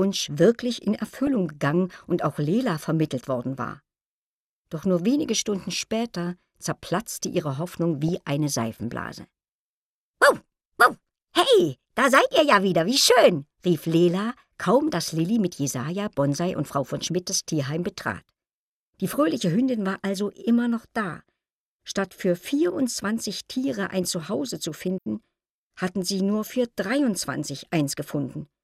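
Short bursts of burbling break through the sound three times, from 1.08 to 1.27 s, from 8.08 to 8.16 s and from 19.92 to 20.11 s. This is DAB burbling. Weak reception left a small fraction of bits corrupted, around 0.1 to 0.15 percent, and those errors slipped past error correction into the MP2 data. Damaged samples put short blips of noise into single sub-bands.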